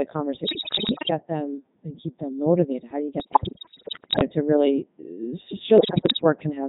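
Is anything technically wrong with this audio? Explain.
Yes. Throughout, the speech has the robotic, buzzy character of the Codec 2 vocoder, heavily damaged, which fits its 3.2 kbit/s mode. It rebuilds speech from sine waves and sends only pitch, voicing, energy and envelope, so unlike ordinary codec smearing, the original waveform is gone entirely.

Bit errors on digital voice radio strike at 0.44–1.10 s (ending before "them and keep them"), 3.20–4.23 s (after "do you", before "to really uh") and 5.78–6.24 s. Corrupted parameter bits, around one in seven, make whole frames leap in pitch, level and timbre, producing bleeps, warbles and gibberish rather than silent dropouts.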